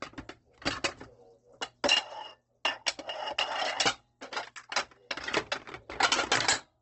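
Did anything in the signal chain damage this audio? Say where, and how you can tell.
Yes, at the codec stage: nothing above 8.2 kHz throughout, and band-filled noise makes the sound rough and grainy, which fits likely Opus compression near 16 kbps.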